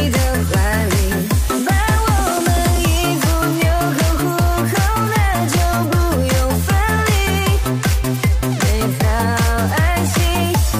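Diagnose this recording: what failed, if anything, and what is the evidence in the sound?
Nothing in the signal chain failed: no dropouts, clipping, glitches or other defects can be heard at any point in the recording.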